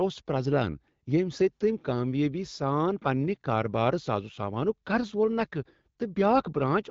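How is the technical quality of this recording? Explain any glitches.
The speech shows two short bursts of AMR bit errors over wideband AMR-WB coding, whose light codec damage fits a rate around 12.65 kbit/s. At 4.33–4.38 s and 6.38–6.47 s, flipped low-priority bits in a few frames (heavier in the first burst) misplace excitation pulses and skew pitch, gain and spectral detail, giving a brief hoarse, gargly scratch at roughly unchanged pitch and level.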